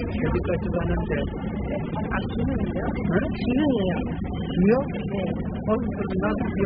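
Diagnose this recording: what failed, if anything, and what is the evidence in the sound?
The codec stage failed: the sound was most likely squeezed through AAC compression (AAC-LC) at a very low bitrate, in the region of 8 kbps. Throughout the clip nothing survives above 5 kHz, so the sounds come out dull. With so few bits per frame, the encoder drops whole bands and quantises the rest coarsely against its hearing model, leaving heavy smearing and a warbling, fizzy texture on anything sustained.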